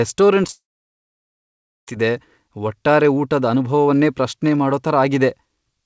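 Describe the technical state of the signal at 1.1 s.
At 1.1 s the signal is silent, inside what is likely a long network dropout from 0.51 to 1.88 s. A brief concealment hiss fades out, and speech resumes with the missing stretch lost.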